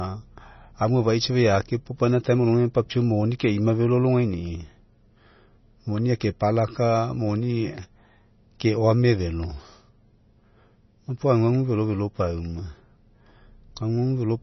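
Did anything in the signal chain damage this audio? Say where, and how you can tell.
Yes, at the codec stage, throughout the speech. Nothing is heard above 5.9 kHz, and the sound is watery and swirly, with smeared onsets. This is likely heavy MP3 compression at a low bitrate, such as 24 kbps. The encoder cut the treble and dropped weak frequency lines frame by frame.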